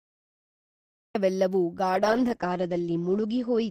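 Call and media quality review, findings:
Cut-off start, 0.0–1.15 s: digital silence, then audio enters abruptly mid-sound at 1.15 s with no attack or fade. Capture or stream began late. Waveform: flat line, then abrupt onset at the cut. Spectrogram: blank, then a hard vertical edge across all frequencies.

Call bitrate drop, 1.94 s onward: audio turns muffled and watery through to the end, worst for about 1.3 s. The encoder was starved after the bandwidth estimate fell, consistent with Opus going from roughly 32 to 11 kbps. Coarser coding plus a lowpass at 8 kHz, down from 20 kHz. Spectrogram: the band above 8 kHz goes empty, with smeared, blotchy harmonics below.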